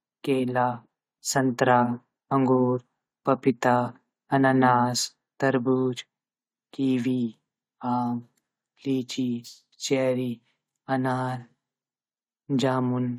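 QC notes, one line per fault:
Nothing stood out on listening to the speech in this clip.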